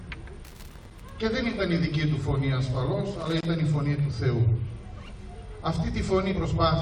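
A worn or dirty contact making and breaking as it moved caused loose connector crackle from 0.44 to 1.10 s and again from 3.20 to 3.46 s. Each time the signal is chopped on and off, giving an irregular burst of scratchy crackle.

At 6.31 to 6.33 s there is damaged data in a compressed stream. Corrupted bytes left the decoder unable to read those frames, so it lost sync while hunting for the next valid header. This produces a brief glitch of about 20 ms, heard as a chirp, squawk, click or short hole.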